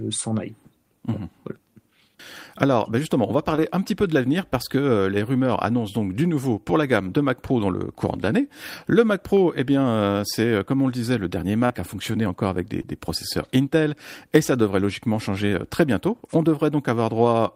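Short concealed packet loss at 3.55–3.60 s, 11.66–11.72 s and 12.82–12.85 s: gaps of about 20–40 ms were patched by extending the preceding sound, leaving brief smears.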